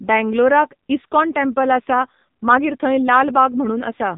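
From start to finish the speech carries the sound of the AMR narrowband mobile codec. The band stops hard at 4 kHz, so sibilants and breath lose their top, and the voice is rebuilt from a vocal-tract model excited by sparse pulses rather than carried as a waveform. Damage is heavy: the voice comes out buzzy and synthetic, with a coarse, mechanical edge on every syllable, which fits one of the low AMR-NB modes around 6.7 kbps.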